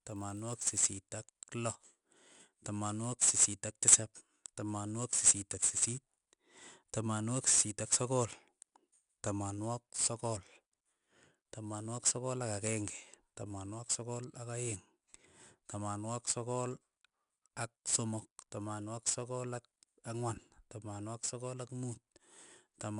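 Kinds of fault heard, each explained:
4-bit ADPCM compression: coarse 4-bit prediction steps add gritty hiss that rises with the speech; spectrograms show noise filling loud passages.
Block size mismatch (padded): from 0 to 0.8 s, zero-filled gaps end each block, giving a 43.1 Hz buzz; the waveform shows regular flat dropouts, fitting 1024-sample reads.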